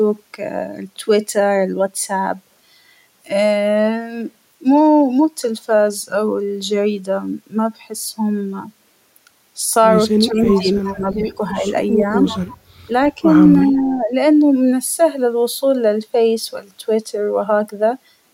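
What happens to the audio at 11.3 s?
The echo canceller likely mistook both sides talking for echo, causing speech suppressed in double talk from 10.27 to 11.7 s, with dips of up to about 15 dB.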